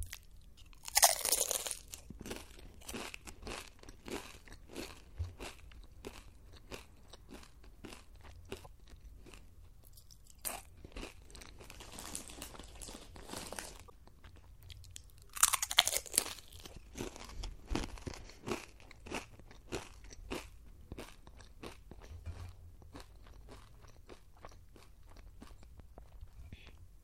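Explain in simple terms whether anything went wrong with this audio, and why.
Damaged data in a compressed stream shows up twice, at 8.61 to 8.67 s and 13.86 to 13.91 s, each lasting about a twentieth of a second. Part of the compressed file was spoiled there, so the decoder misread those pieces and briefly lost its place.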